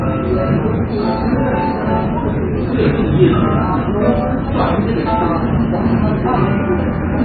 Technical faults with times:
0.00-7.24 MP3 compression

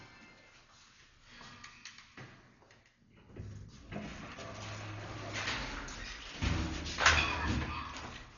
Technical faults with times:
0.00-8.37 Dolby Digital compression

